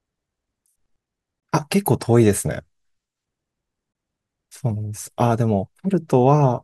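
The speech was delivered in chunks about 2.5 s long, and a stretch of silence sits at each join, a gap between chunks. It shows up twice, from 1.40 to 1.43 s and from 3.93 to 3.95 s, each about 25 ms long. Nothing is dropped; the sound simply stops and resumes. Each hole has abrupt edges, so it registers as a brief, clipped dropout at a steady interval.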